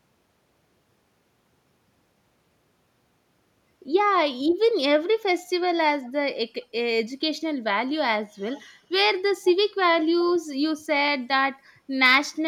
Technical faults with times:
6.03-6.09 echo leak
8.52-8.64 echo leak
9.46-9.53 echo leak

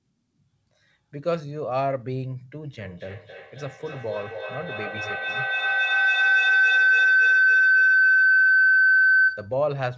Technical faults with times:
2.63-9.61 feedback howl

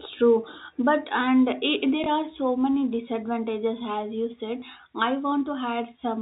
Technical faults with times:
2.04-2.06 packet loss with last packet repeated
4.60-4.62 packet loss with last packet repeated

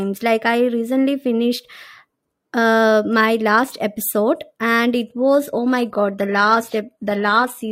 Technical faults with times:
5.03-7.72 adaptive stream at a lower bitrate

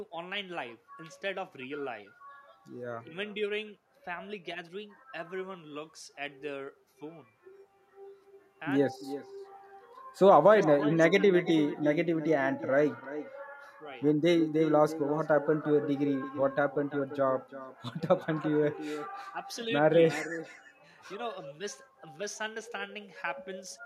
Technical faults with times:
0.00-23.86 echo with no canceller

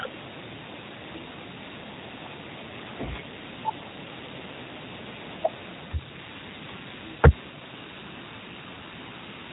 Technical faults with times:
0.00-9.52 G.729 codec

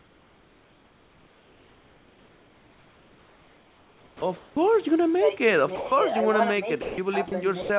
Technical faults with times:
0.00-4.70 sound chopped by the voice detector
5.76-5.92 sound dropped by the voice detector
6.82-6.98 sound dropped by the voice detector
7.28-7.32 sound dropped by the voice detector
7.62-7.70 sound dropped by the voice detector

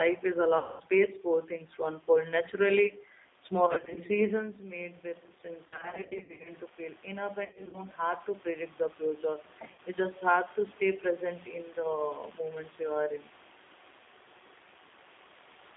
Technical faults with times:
0.00-15.76 G.729 codec
0.58-0.82 VoIP packet loss concealed by the speech codec
3.66-3.98 VoIP packet loss concealed by the speech codec
5.65-6.51 VoIP packet loss concealed by the speech codec
7.45-7.80 VoIP packet loss concealed by the speech codec
9.73-9.80 VoIP packet loss concealed by the speech codec

